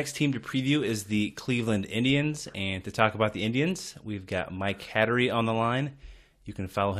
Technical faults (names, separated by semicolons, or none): none